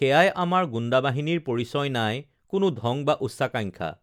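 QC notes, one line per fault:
No faults were found in this speech clip. Nothing in the recording calls for a note.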